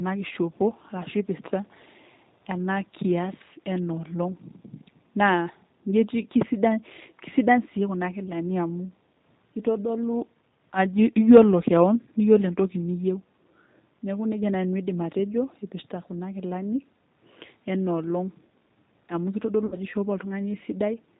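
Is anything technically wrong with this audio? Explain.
Yes, three problems can be heard in this speech clip.

Throughout, the speech sounds slightly rough and synthetic, with nothing above 4 kHz, and the codec damage is plainly audible. This comes from the G.729 codec at 8 kbit/s. It rebuilds each 10 ms frame from a vocal-tract filter, a pitch predictor and a few pulses, so fine detail is discarded.

From 1.63 to 1.74 s, a very faint, brief scrap of delayed speech appears, trailing the original by about 248 ms. This is likely an echo leak, where a loudspeaker's sound reached the far microphone and the echo canceller didn't fully remove it.

From 19.66 to 19.77 s, the speech smears into a buzzy tone or coloured noise that fades, then stays weak and distorted briefly before recovering. This is VoIP packet loss concealed by the speech codec, about 60 ms of missing audio. That fits a few lost packets. 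The decoder extrapolated from its last pitch and filter while lowering the gain.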